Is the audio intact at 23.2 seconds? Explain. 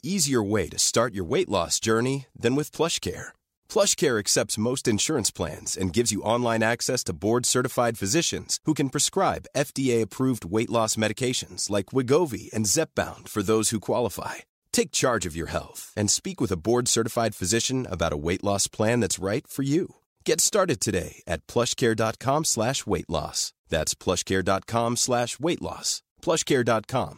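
Yes, the audio is intact at 23.2 seconds, with no fault audible in the speech at that moment.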